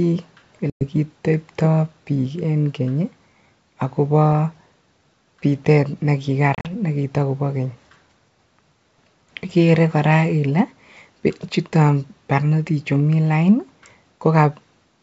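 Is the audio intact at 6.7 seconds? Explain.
No. At 6.7 seconds the audio is just coming out of packet loss on an ADPCM call, which runs from 6.55 to 6.70 s. About 80 ms of sound drops out in short, hard-edged silent gaps scattered over roughly 100 ms. The longest gap is 40 ms. Because ADPCM codes only differences, the decoder's predictor and step size lose track of the sender. Sound returns at "nekitokobo keny" with brief distortion before settling.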